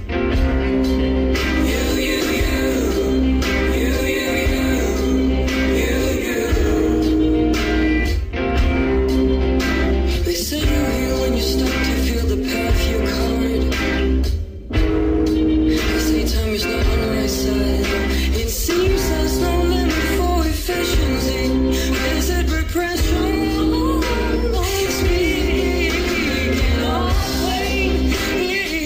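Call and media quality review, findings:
No audible faults found.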